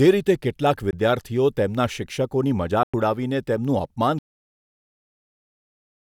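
At 0.91 to 0.93 s the speech briefly vanishes, and again at 2.83 to 2.94 s, for roughly 20 ms and then about 100 ms. These are likely Bluetooth dropouts. Audio packets failed to reach the headphones in time and were discarded, so the output fell silent. The gaps open and close within a few milliseconds, and the speech picks up further along, as though it had kept playing. The lengths fit one lost packet and then about five.

A cut-off end follows at 4.19 s. The speech stops abruptly mid-sound and drops straight to digital silence with no natural decay, and that silence lasts to the end of the clip. The final buffers were never written or played out, so the tail of the audio is simply missing rather than faded or trimmed at a pause.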